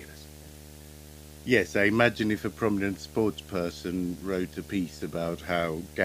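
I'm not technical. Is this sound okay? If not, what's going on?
No. Video or display buzz runs through the whole clip, from start to finish, sitting underneath the speech. It sounds like a steady low buzz with a fizzy hiss on top. A screen or its video cable is leaking electrical noise into the audio wiring, and the buzz repeats 75 times a second, matching the rate at which that display redraws its picture. Moving the cables apart or using a different screen should stop it.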